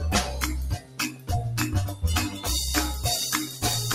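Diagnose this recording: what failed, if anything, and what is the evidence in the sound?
The failure is in call processing: a noise suppressor built for speech has been left running on this audio. It treats steady tones and decaying tails as noise, so the level keeps swinging by around 10 dB through the whole clip. Onsets get through cleanly, but anything held sinks, and the result is a pumping, fluttery thinness rather than a stable bed of sound.

You can hear specific spots where the sound is cut by the noise suppressor. From 0.77 to 1.3 s it drops hardest, about 13 dB at the deepest, for roughly four tenths of a second. There's a lighter dip of about 6 dB between 2.3 and 2.46 s, and one of about 9 dB from 3.46 to 3.64 s. Each time, sustained or fading material gets clamped down or has its decay chopped short.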